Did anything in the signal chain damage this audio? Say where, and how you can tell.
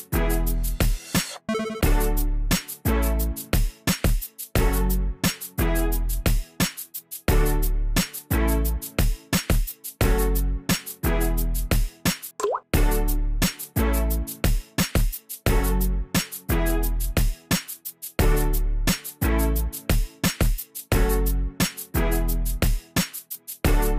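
No, nothing damaged this audio.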